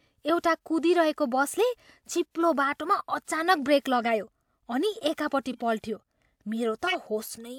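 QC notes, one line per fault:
3.95–4.13 s, 5.51–5.62 s, 6.87–6.95 s: corrupt frame decoded. Damaged compressed frames were played anyway, so misread gains and codes put energy in the wrong bands, heard as brief chirpy noise bursts peaking around -20, -30 and -10 dBFS. On a spectrogram they appear as short, blocky smears that don't follow the speech harmonics. On the waveform they show as abrupt spikes lasting a few frames.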